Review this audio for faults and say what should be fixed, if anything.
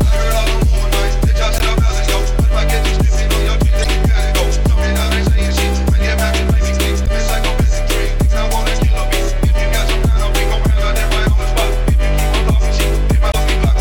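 Damaged data in a compressed stream causes brief glitches at 1.56–1.61, 3.82–3.86, 7.03–7.08 and 13.31–13.35 s. The decoder misreads corrupted frames and loses sync. Unlike a buffer dropout, these come from damaged data rather than late delivery. Verify stream integrity with checksums or error-resilient framing.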